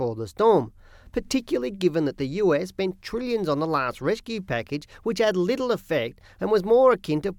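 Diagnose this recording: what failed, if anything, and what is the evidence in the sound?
No failure is evident here.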